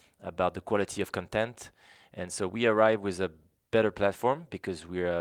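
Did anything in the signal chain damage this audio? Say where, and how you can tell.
No, nothing audible in this speech points to damage at any stage of the signal chain.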